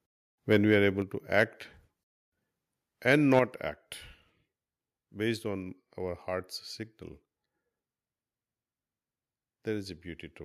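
At 0.52–0.56 s, just before "we are", the loudest syllable has a harsh, crackling edge, likely microphone overload with peaks about 1 dB past the converter's ceiling. Around 1.02 s, right after "we are", the microphone volume steps down: voice and background drop together by about 4 dB in one step. Unlike a fade, this is an abrupt level change, likely the call software lowering the input gain. Overload crackle returns at 1.39–1.43 s, about 2 dB over, and at 3.09–3.39 s, about 4 dB over. The 3.09 s burst is followed at 3.39 s by another step down of about 6 dB. That sudden drop, with no distortion, sets it apart from the overload's gritty, flattened peaks.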